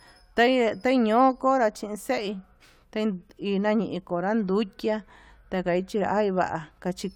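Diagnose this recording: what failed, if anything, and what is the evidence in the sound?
Nothing failed in this speech recording at any stage of the chain. No moment in the sound stands out as evidence of a fault.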